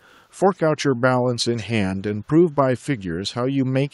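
From 1.56 to 1.64 s, a brief echo leak appears: a faint copy of the speech returns about 190 ms late, well below the direct sound. The likely cause is a far-end echo canceller passing residual loudspeaker pickup. On a spectrogram, a weak, delayed repeat of the preceding harmonics shows.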